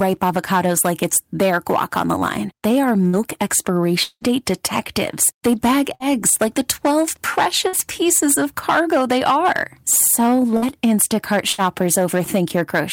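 A stage in the chain is driven about 9 dB past what it can pass, so throughout the speech every peak is sliced flat. This hard clipping affects roughly one sample in twenty, and the squared-off tops throw harmonics high into the spectrum. The result is a gritty crackle riding on each louder syllable, spread across the whole clip rather than confined to isolated moments.

At 3.07 to 3.16 s comes the first burst of packet loss. A run of packets carrying about 60 ms of audio never arrives in time, and the receiver covers the hole by extending the last sound it had and fading it out. That is heard as a short held buzz or hiss, after which the speech picks up slightly further along with that slice gone.

From 4.03 to 4.24 s there is a longer gap, likely a network dropout, in which about 180 ms of audio is lost. The receiver again stretches the final sound into a fading tail. Here it runs out before the stream returns, leaving a brief dead silence near the end of the gap. 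The speech then resumes past the missing stretch.

The same short packet-loss bursts return at 5.95 to 6.03 s, 7.68 to 7.76 s, 10.57 to 10.65 s and 11.52 to 11.61 s. Each removes about 60 ms and replaces it with a brief decaying buzz or hiss, followed by a small jump forward in the speech.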